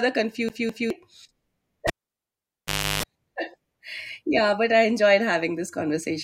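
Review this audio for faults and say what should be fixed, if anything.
From 0.49 to 0.90 s the speech shows a CD stuck on one turn. A scratch sends the laser back one track each revolution, so a 0.21 s segment plays twice in a row, with a brief mute at each jump. The result is an even, mechanical stutter rather than a natural repetition. Replace that span with a clean read of the disc, and prevent recurrence by ripping from an undamaged or resurfaced disc with an error-correcting extraction tool.

From 1.87 to 3.03 s there is a cable pulled and plugged in while the line was live. The sound starts with a pop as contact breaks, then drops to near silence for about 1.1 s. While only the plug tip touches, a 0.33 s burst of 50 Hz mains buzz follows, and a second pop marks the return of the signal. This section needs retaking or repair, and cables should only be connected or disconnected with the channel muted and connectors secured against accidental pulls.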